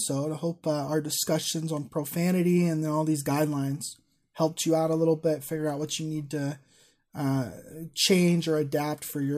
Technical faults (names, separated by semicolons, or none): none